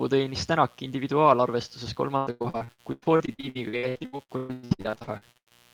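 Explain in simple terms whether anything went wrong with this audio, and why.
Two things went wrong. A mains buzz runs under the speech for the whole clip. It is a steady, raspy buzz tied to a 60 Hz power supply, where electrical switching spikes leak in twice per cycle. That gritty, bright edge sets it apart from a smooth, low hum.

From 2.17 s to 5.53 s the speech turns choppy and robotic because of repeated packet loss. Dozens of small chunks went missing, and each was patched by stretching the sound just before it, so about half of that stretch is filler. The longest hole is about 0.12 s. Unlike a single dropout, the breaks keep coming close together.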